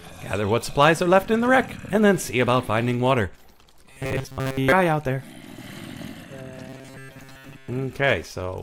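From 3.92 to 4.72 s and again from 6.69 to 7.68 s, the sound becomes a rigid metallic buzz at 133 Hz. This is robotic sound from repeated short buffers, likely a 7.5 ms segment looped over most of the real audio. A spectrogram shows stacked 133 Hz harmonics, and the waveform shows identical repeating cycles.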